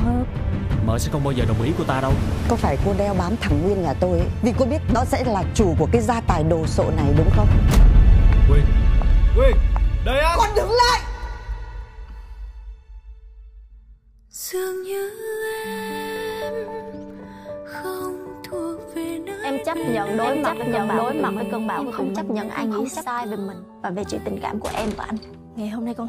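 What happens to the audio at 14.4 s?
Nothing goes wrong at 14.4 s; the audio plays through that moment intact, with no dropout, click or distortion.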